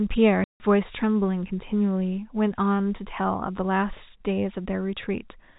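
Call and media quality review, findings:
Packet loss filled with silence, 0.44 to 0.60 s. Speech drops to dead silence for 160 ms, with hard edges at entry and exit. Gap length fits eight consecutive 20 ms packets. Probable component: network path or receiver jitter buffer, with no concealment applied. Audible through the G.711 telephone coding band, which cuts everything above 4 kHz.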